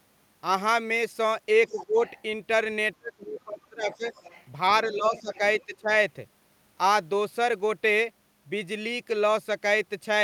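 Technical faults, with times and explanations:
1.67–2.22 s, 3.92–4.46 s and 5.16–5.65 s, other side's voice leaking through: a faint second voice sits under the talker, about 20 dB below the speech in the first stretch and about 25 dB below in the other two. It likely comes from loudspeaker echo the canceller failed to remove. On a spectrogram it shows as weak harmonic traces running under the main voice's bands, and on the waveform as a low layer under the talker's speech.
1.71–1.99 s, 2.98–4.05 s and 4.89–5.88 s, speech suppressed in double talk: while both sides speak, the talker's level sinks, by about 15 dB over roughly a fifth of a second, by about 25 dB over roughly 0.7 s, then by about 10 dB over about half a second. This is likely the canceller attenuating everything when it cannot separate near speech from echo. The waveform envelope shows sudden dips, and the spectrogram shows fading or gapped upper harmonics.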